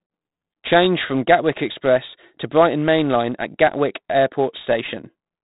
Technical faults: 4-bit ADPCM compression

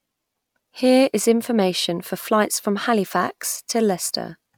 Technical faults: none

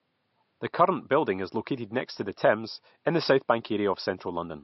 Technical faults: low-bitrate audio saved at a high bitrate

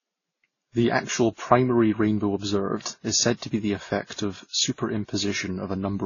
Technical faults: transcoding between lossy codecs

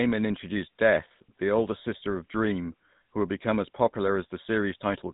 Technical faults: GSM full-rate codec

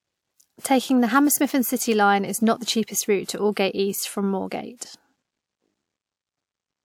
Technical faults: pre-echo

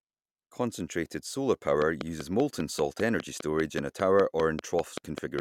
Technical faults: train of clicks

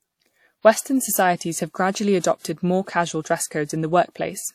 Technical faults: transcoding between lossy codecs

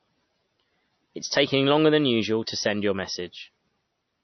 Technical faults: MP3 compression

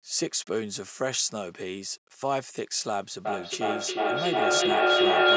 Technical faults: low bit depth without dither; feedback echo between two devices

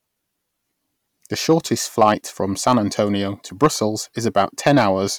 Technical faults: hard clipping

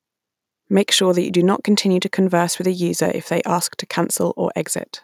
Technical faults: none

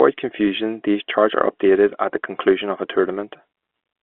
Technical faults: none

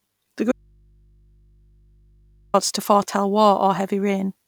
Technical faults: audio dropout to a faint residue

